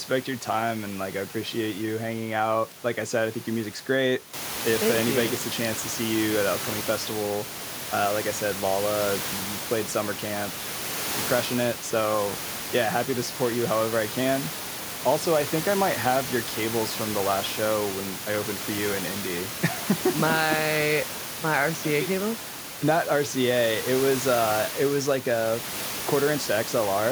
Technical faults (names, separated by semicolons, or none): none